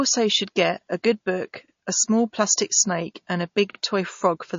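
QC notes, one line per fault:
throughout, MP3 compression: speech sounds watery and swirly with nothing above 7.2 kHz, likely from a low bitrate near 32 kbps; spectrogram shows a hard ceiling and flickering holes.
1.68–1.73 s and 3.73–3.78 s, overlapping chunks: a 50 ms piece plays twice at each join every 2.0 s, heard as a stutter after "get a good book" and after "plastic snake and a"; the waveform shows a repeated segment with a step.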